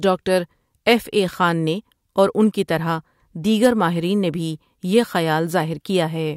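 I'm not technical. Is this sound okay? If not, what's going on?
No. Hard clipping at 3.65 s: the sound briefly got louder than the recording could hold, so its peaks were chopped flat, causing a short crackle.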